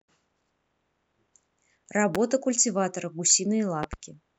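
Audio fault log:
2.15–2.18 s and 3.83–3.96 s: loud pop. A single sharp pop sits on top of the speech, and later two pops come in quick succession. Each peaks at roughly 15 dB above the signal. The speech carries on underneath. The likely cause is a brief voltage spike, such as static or a switch.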